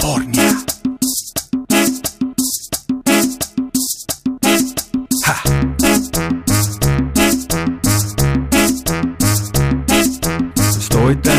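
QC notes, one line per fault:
Throughout: hard clipping. The signal is driven about 7 dB past what the stage can pass, so its peaks are sliced flat. Roughly 2 percent of samples hit that ceiling. The flattened tops add harmonics high up, heard as crackle on loud peaks.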